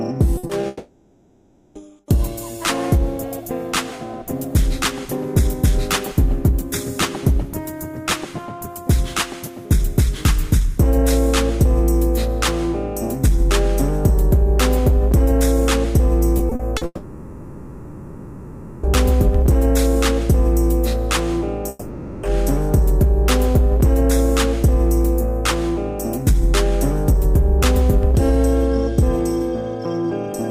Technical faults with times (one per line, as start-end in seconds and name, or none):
0.37-0.45 burst of packet loss
0.47-0.65 short concealed packet loss
0.67-1.77 long network dropout
16.37-16.83 repeated packet loss (robotic sound)
16.85-18.85 long network dropout
21.69-22.25 long network dropout